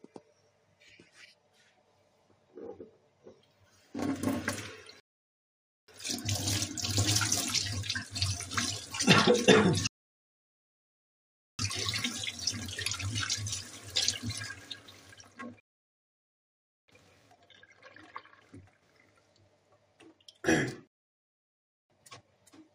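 Everyday sounds, interrupted by four rebuffering stalls. The player runs dry and falls silent at 5.0 s (0.88 s), 9.87 s (1.72 s), 15.6 s (1.28 s) and 20.87 s (1.03 s). Each time the sound resumes exactly where it stopped. Nothing is skipped; only time is added.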